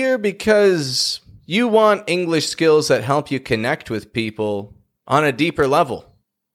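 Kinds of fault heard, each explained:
Word clock ticks: Sharp ticks of uneven strength repeat at a steady rate through the speech, from about 0.23 s to 6.40 s. They come roughly every third of a second, around thirty in all. Each tick fits a single sample being dropped or repeated when a receiving device's free-running clock slips past the sender's. That rate points to the two clocks differing by roughly 100 parts per million, so a digital link likely lacks clock lock.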